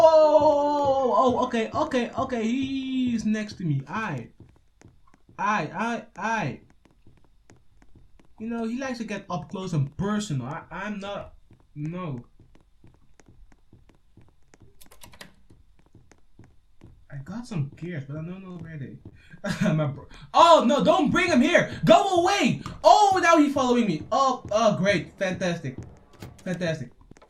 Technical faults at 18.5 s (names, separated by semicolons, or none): short concealed packet loss